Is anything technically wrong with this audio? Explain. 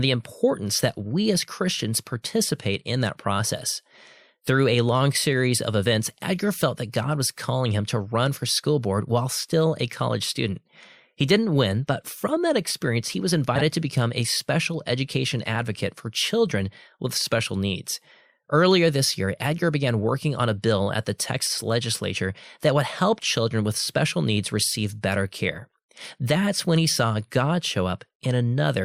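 Yes. Between 13.55 and 13.62 s, after "that experience he was" and before "to become a special", frames out of order: two adjacent blocks of about 26 ms each swap places, giving a brief garbled flutter and no lost time.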